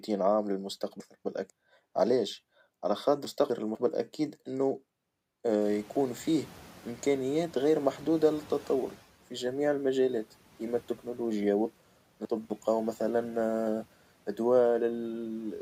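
Speech, with a couple of distinct problems. There are chunks out of order at 1.0 to 1.5 s, 3.25 to 3.75 s and 11.75 to 12.5 s. Each time, a 250 ms block of audio turned up late and played after the block that should have followed it: one block late in the first two spots, two blocks late in the last. Nothing goes missing, but the speech jumbles for a moment, with three hard splices in each spot. Then around five and a half seconds the room noise jumps by about 21 dB, still sitting roughly 24 dB under the speech, and you can hear the noise suppressor catching up from 5.61 to 8.97 s. Its noise estimate lagged the sudden rise, so the background comes through under-treated at first and then settles lower as the estimate adapts over about 3.4 s, ending up trimmed by about 7 dB.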